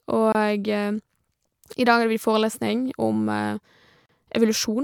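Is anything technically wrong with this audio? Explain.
Yes, there are two gaps at joins of encoded pieces, at 0.32 to 0.35 s (about 25 ms) and 4.06 to 4.09 s (about 34 ms). The speech was encoded in chunks and stitched untrimmed, so encoder start delay and end padding leave short silences with smeared edges, then the speech picks up where it stopped.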